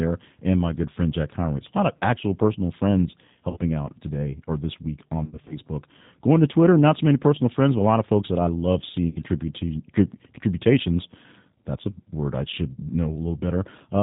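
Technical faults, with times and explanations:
throughout: G.729 codec, an 8 kbit/s low-rate speech coder that rebuilds speech from a vocal-tract model, cuts everything above 4 kHz and leaves speech audibly rough and synthetic.
1.97–2.00 s, 3.50–3.58 s, 5.24–5.59 s, 9.09–9.17 s, 12.73–12.79 s: VoIP packet loss concealed by the speech codec. Missing audio is extrapolated into a fading buzzy tone or coloured noise, scattered across the gap after "today or this week".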